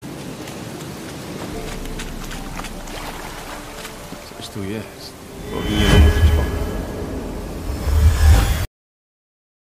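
At 8.65 s there's a cut-off end: the last buffers never made it out, so the sound stops mid-event and drops straight to digital silence, no decay.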